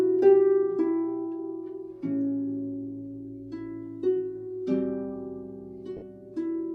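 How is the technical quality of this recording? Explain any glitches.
There's one glitch, near the end. From about 5.97 to 6.02 s there's a 50 ms dropout from lost LE Audio frames, which fits roughly five 10 ms frames going missing. The LC3 decoder covers the gap by repeating the last spectrum with scrambled signs, so you hear a brief noisy smear instead of clean sound. The light lossy compression underneath does only slight damage.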